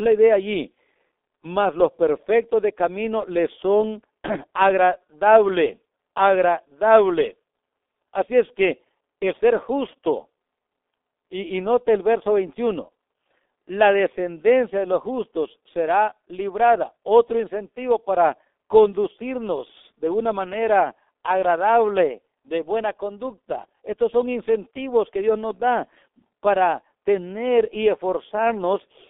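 Throughout this speech clip the voice sounds muffled and hoarse, with blurred, smeared consonants and nothing above about 3.6 kHz or below 250 Hz. This is heavy G.723.1 codec damage. The codec works in 30 ms frames and re-estimates its model of the voice only slowly, so fast articulation smears. Its very low data rate, which fits a bitrate around 6 kbit/s, discards fine spectral detail and leaves the rough, narrow telephone quality.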